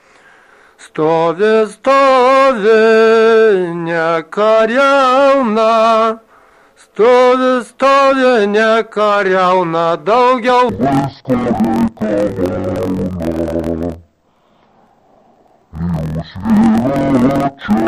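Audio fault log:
10.69–17.88 s, interleaved audio read as planar: from 10.69 s to the end the sound drops an octave, doubled and choppy, with a rough stutter repeating about 43 times a second. Each 23.22 ms block, which fits a 1024-sample buffer, holds alternating left and right samples, but the first half is taken as left and the second as right. Each channel then plays its samples at half speed, pitching everything down 12 semitones while the overall pace holds.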